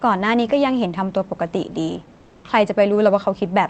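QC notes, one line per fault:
2.17–2.43 s, comfort noise in place of the background: for about 260 ms the room hiss turns steady and featureless and drops about 3 dB, likely because the sender's discontinuous transmission paused in silence and the receiver filled the gap with synthetic noise.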